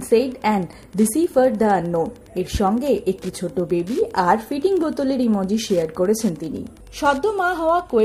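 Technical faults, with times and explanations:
Throughout, Wi-Fi interference: a nearby radio's beacon every 102.4 ms gets rectified by the audio circuit, giving a steady tick about ten times a second, roughly 30 dB under the sound.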